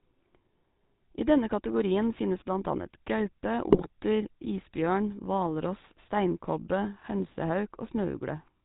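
From start to finish the speech carries the sound of the GSM full-rate codec, with plainly audible damage that fits the 13 kbps full-rate coder. The codec rebuilds the voice from a vocal-tract filter fed by a sparse, regularly spaced pulse excitation, so much of the fine detail of the original waveform is discarded. Nothing reaches above 4 kHz, which leaves the speech muffled at the top, and the coarse excitation adds a steady buzzy, gravelly roughness to every voiced sound.

From 3.70 to 3.88 s, straight after "finnes blant annet gaupe", GSM bit errors break up the signal for a burst spanning several codec frames, consistent with a heavy error rate on a weak radio link. Corrupted filter, pitch and gain parameters reach the decoder, so each damaged frame is rebuilt with a warped spectrum or a wrong level. The result is a short stretch of squawking, popping and gargling in place of clean speech.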